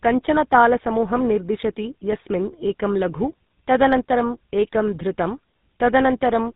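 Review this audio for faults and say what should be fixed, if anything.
Tandem speech coding runs throughout the clip. The speech sounds rough, muffled and warbly, with nothing above about 3.8 kHz. The roughness fits two passes through a GSM full-rate speech codec with a plain G.711 link between them. At each border the call was decoded and coded again, so the second GSM coder worked on the first one's errors and compounded them. To prevent it, carry the coded speech end to end with transcoder-free operation, or keep one codec across the whole call path.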